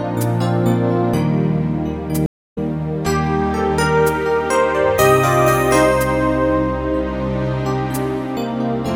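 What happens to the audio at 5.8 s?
Nothing goes wrong at 5.8 s; the audio plays through that point intact, with no dropout, click or other fault.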